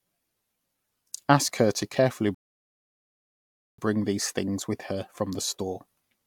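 Speech that stalls partway through: at 2.35 s the sound drops to silence and holds there until 3.78 s, then picks up again exactly where it left off. That's a rebuffering stall. The player used up its downloaded audio and just waited for more to arrive, so nothing gets skipped. You simply get about 1.4 s of dead air inserted into the middle, and the clip runs that much longer.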